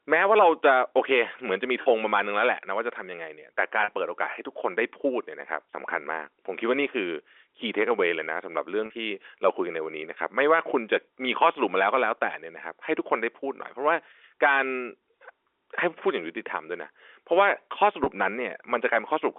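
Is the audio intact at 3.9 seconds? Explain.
No. Packet loss with pitch repetition runs from 3.84 to 3.88 s, right up against the moment asked about. About 40 ms of audio went missing, which fits two lost 20 ms packets. The receiver filled the hole by repeating the last pitch period and fading it down. Because the gap is this short, it comes across as a brief held, buzzy tone in the narrowband G.711 telephone sound, not as silence.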